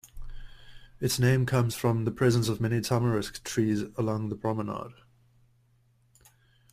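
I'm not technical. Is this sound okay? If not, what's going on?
No. Throughout the clip, from start to finish, there is a crude rate conversion: the audio was converted to a different speed of digital playback by simply repeating some of its tiny samples, with no smoothing. The pattern fits a step from 44.1 kHz to 48 kHz. Those repeats leave a regular error that adds stray tones the speech doesn't contain, heard as a gritty fizz riding on the louder and brighter sounds, noticeably quieter than the speech itself.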